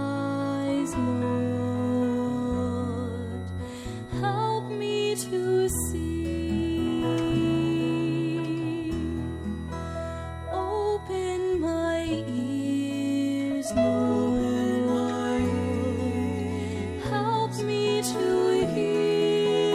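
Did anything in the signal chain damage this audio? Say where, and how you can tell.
Yes: a switching supply whistle in the analogue stage, present throughout. A high tone wanders between about 1.92 and 1.96 kHz, roughly 2 kHz, sitting around 25 dB below the programme. A switch-mode supply running in an audible burst mode, or beating with another supply, has its ripple coupling onto the audio path. Its pitch drift marks it as a loaded supply rather than mains hum, which would sit fixed at 50 or 60 Hz harmonics.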